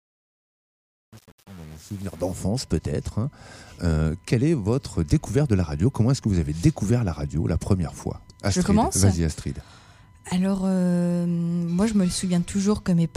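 The fade that runs from the start to 2.41 s was processed with too few bits and no dither, leaving only about 7 bits of resolution, so the result is truncation distortion on a fade. As the level nears the smallest step, the waveform falls onto a handful of coarse steps. The entire stretch from 0.0 to 2.41 s sounds gritty rather than smooth.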